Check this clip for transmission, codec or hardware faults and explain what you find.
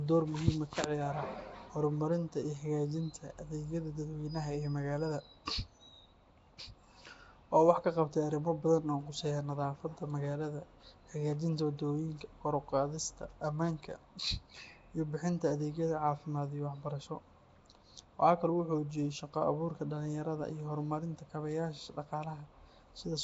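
One codec fault is audible for the whole clip.

Throughout, the speech has a rough, hissy halo, a smeared underwater quality and nothing above 7.7 kHz. This is likely Nellymoser compression at around 32 kbps, which codes 256-sample blocks coarsely and fills weak bands with noise.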